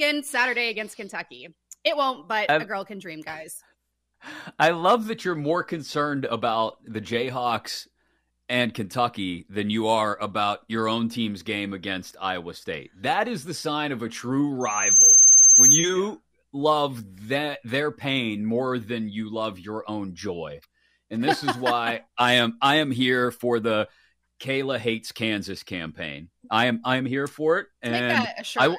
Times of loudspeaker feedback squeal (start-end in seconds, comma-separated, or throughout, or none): 14.60-16.00